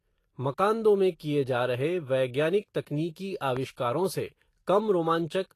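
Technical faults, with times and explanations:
Throughout, likely Vorbis compression: the treble is grainy and hissy, with blurred consonant attacks and nothing above 14.2 kHz, which fits a low bitrate around 34 kbps. On a spectrogram the upper band shows a hard ceiling and patchy, noisy blocks instead of fine harmonic detail.
3.57 to 3.59 s, loud pop: a single sharp click sits on top of the speech, peaking about 10 dB above it, most likely from a sudden voltage step entering the chain. On a waveform it is a narrow spike; on a spectrogram, a thin vertical broadband stripe.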